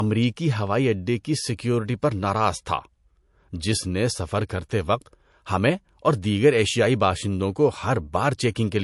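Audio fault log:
throughout: low-bitrate audio saved at a high bitrate. The speech stops dead above 11.3 kHz, likely from an earlier heavily compressed MP3 pass that later high-rate re-encoding cannot restore.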